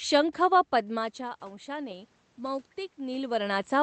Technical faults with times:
0.71-3.73 automatic gain rising

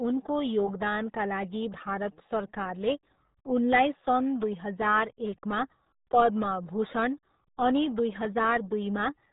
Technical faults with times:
0.00-9.33 RealAudio 14.4 codec

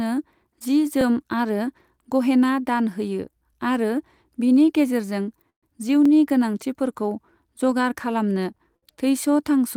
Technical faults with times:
1.01-1.03 overlapping chunks
3.53-3.55 overlapping chunks
5.50-5.64 call audio freeze
6.05-6.08 overlapping chunks
8.58-8.60 overlapping chunks
8.76-8.84 short stall from a late packet

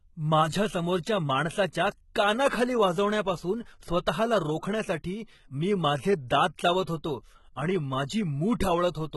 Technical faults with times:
0.00-9.16 HE-AAC compression

